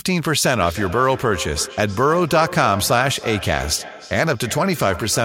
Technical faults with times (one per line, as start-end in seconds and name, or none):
0.57-5.25 feedback echo between two devices